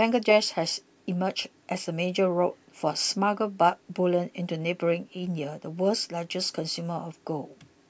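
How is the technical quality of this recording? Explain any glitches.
No glitches can be heard anywhere in this speech recording. There is nothing technical in it that calls for an explanation.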